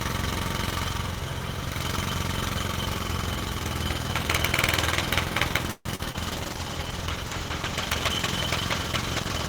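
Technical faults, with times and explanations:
5.71 to 5.87 s, call audio freeze: The last sound is drawn out as a fading buzz or hiss for about 140 ms, ending in roughly 40 ms of silence. Packets were likely held up and the jitter buffer ran dry. Playback then resumes where it stopped, so nothing is lost, but everything after runs 140 ms later.
5.95 to 6.11 s and 6.12 to 6.16 s, short concealed packet loss: Two brief smears follow the freeze. About 40 ms, then 20 ms, of audio never reached the decoder in time. The receiver continued the preceding sound to cover each hole, then blended back into the real signal.
6.28 s to the end, call bitrate drop: The bitrate falls from 32 kbps to 14 kbps and stays there for about 3.2 s. The encoder must code far more coarsely, so the sound turns rough, watery and duller as high-frequency detail thins.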